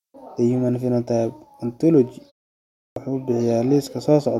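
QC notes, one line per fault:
2.86–2.96 s, clipped start after a pause: the sound comes back after a 0.63 s gap with roughly the first 103 ms missing, so it snaps in out of dead silence instead of easing in. What's happening is the output path dozes off during the quiet stretch and takes a moment to wake and lock again, and whatever arrives during that moment just gets dropped.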